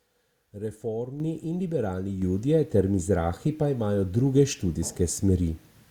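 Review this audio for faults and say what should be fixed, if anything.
Microphone volume stepped up at 1.2 s, before "in liberalni" (about 7 dB), and at 2.22 s, after it (about 5 dB). Automatic input gain lifted speech and background together, which shows as abrupt envelope steps in the waveform and evenly brighter spectrogram columns. Disable automatic microphone gain control and set a fixed input level.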